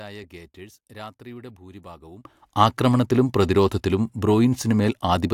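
One channel inverted, from the start to 2.25 s of this speech clip: the mono sum drops by about 21 dB and turns faint, likely because one stereo channel's polarity is reversed so the shared centre cancels, recovering just before "ആക്രമണത്തിലും പ്രതിരോധത്തിലും".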